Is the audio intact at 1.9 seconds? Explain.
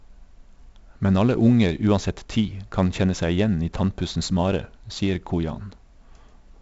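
No. At 1.9 seconds, as across the whole clip, the speech carries 4-bit ADPCM compression. Each sample is coded as a small 4-bit step from a predicted value, with the step size adapting as it goes. The leftover error is broadband noise that follows the signal's level, so loud passages sound gritty and hissy, and sharp onsets distort where the step lags behind. The damage here is heavy. Nothing remains above 7.7 kHz, which dulls the top end and fits a 16 kHz sample rate at 64 kbps.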